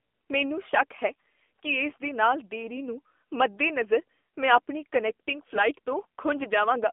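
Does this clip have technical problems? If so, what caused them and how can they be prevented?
Yes. Throughout, the AMR narrowband mobile codec confines the speech to about 250 Hz–3.5 kHz. The buzzy, synthetic tone fits a low AMR-NB bitrate near 7.4 kbps. To prevent it, record or transmit through a wideband path at a higher bitrate instead of a narrowband phone line.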